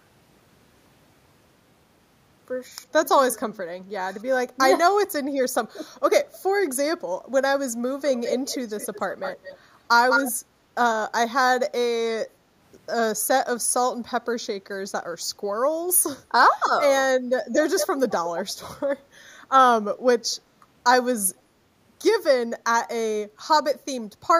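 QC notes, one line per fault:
Throughout, channel delay (comb filtering): one channel runs a fraction of a millisecond, roughly 0.2 ms, behind the other before the two are folded to mono. Content common to both cancels at regularly spaced frequencies, with the first deep notch near 3 kHz and further ones at odd multiples above it. The speech therefore sounds thin and hollow, its presence region scooped out by fixed notches that never move.
8.13–9.58 s, 10.09–10.32 s and 17.78–17.87 s, echo leak: a delayed copy of the speech returns about 204 ms late in the first two spots and 211 ms late in the third. This is likely a far-end loudspeaker feeding a microphone whose echo canceller failed to remove it. The copy sits about 10 dB under the direct speech in the longest stretch, rises to roughly equal level in the second, and falls to about 5 dB under in the brief third scrap.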